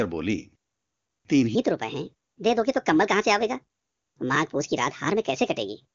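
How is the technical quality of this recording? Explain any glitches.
The recording has one clear fault: from 1.55 s to the end, the audio plays at the wrong speed. The system likely ran that section against a mismatched clock, so it came out about 1.41 times faster than it was captured. Because speed and pitch shift together, everything after 1.55 s jumps up by roughly seven semitones and sounds rushed and chipmunk-like, an abrupt change from the natural pace before it. The speech runs through an AMR wideband (HD Voice) path, with content reaching about 7.2 kHz and no audible roughness from that codec.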